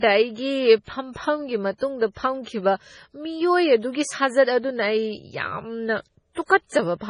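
Throughout the speech, heavy MP3 compression is the likely cause of a watery, swirling texture. The damage points to a low bitrate of around 24 kbps. A spectrogram shows a hard ceiling at 10.5 kHz and speckled, flickering gaps where weak frequency lines drop in and out between frames.

Pre-echo appears at 0.84 to 0.88 s (40 ms), 1.13 to 1.16 s (30 ms), 6.33 to 6.37 s (40 ms) and 6.48 s (17 ms). Codec noise spreads back before sharp attacks, so each onset gets a short hiss and sounds smeared. On a waveform or spectrogram, this shows as a low broadband smudge just before each transient.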